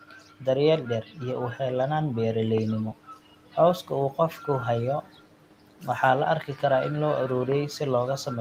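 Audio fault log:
0.01–0.42 s, 1.03–1.18 s, 2.93–3.56 s, 5.02–5.86 s (ending just before "waxaa la"), 6.46–6.63 s (between "waxaa la" and "karaa in"): speech cut by the noise suppressor. The suppressor classed low-level speech as noise and pulled it down with the background by about 9 to 13 dB. Soft consonants and word endings sound swallowed or faint.
2.58–2.60 s: loud pop. A single sharp pop peaks about 10 dB above the speech while the speech continues underneath. This is likely a brief voltage step from a plug, switch or static discharge, which the downstream circuitry shaped into a short, hard transient.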